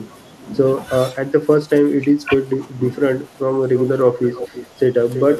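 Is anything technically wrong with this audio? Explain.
Yes, there are two kinds of fault, both pointing to a struggling echo canceller on a hands-free call.

From 1.1 to 2.32 s the speech dips in short pieces, roughly 300 ms in total, falling by about 10 dB at its deepest. A brief, shallower dip of about 5 dB follows at 4.49 to 4.54 s. This is likely speech suppressed in double talk: with both sides talking at once, the canceller could not tell this talker from loudspeaker echo and turned everything down. It differs from packet loss because the sound is attenuated rather than dropped to silence or replaced.

A faint delayed copy of the speech appears at 3.76 to 3.85 s, at 4.25 to 4.67 s, and from 5.14 s to the end. It sits about 15 dB below the speech in the first instance and about 10 dB below in the others. The likely cause is echo leak: one side's loudspeaker output reached that side's microphone and was not fully cancelled, so it came back. 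The fixed 332 ms lag in every instance marks it as returned echo rather than room reverberation, which would trail directly off the sound instead of repeating a third of a second later.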